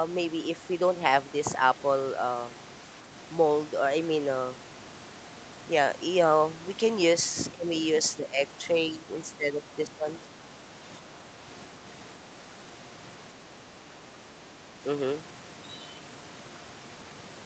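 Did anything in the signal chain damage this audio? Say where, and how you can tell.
Yes. The speech dips by up to about 15 dB at 7.53–7.66, 8.17–8.4, 8.91–10.07 and 14.52–14.59 s, likely speech suppressed in double talk by the call's echo canceller.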